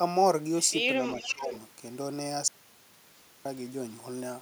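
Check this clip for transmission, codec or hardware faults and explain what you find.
Three faults turn up in the speech, two overlapping near the start and one later.

From 1.06 to 1.59 s there is an echo leak: a copy about 0.41 s late and about 10 dB down, likely a far-end loudspeaker echo the canceller missed, showing as a weaker, shifted repeat of the speech bands.

From 1.14 to 1.52 s, speech is suppressed in double talk: the voice dips by roughly 15 dB for about 0.3 s in total, likely the canceller ducking both talkers at once, visible as faded harmonics.

From 2.48 to 3.45 s an audio dropout to silence removes 0.97 s. It is likely a lost input written as silence, seen as a flat waveform line and a dark spectrogram gap without any room tone.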